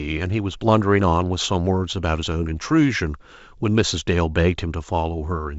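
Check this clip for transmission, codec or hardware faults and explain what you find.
Nothing stood out on listening to this speech, which comes through G.722 wideband telephone coding at 64 kbit/s with its usual light upper-band hiss at most.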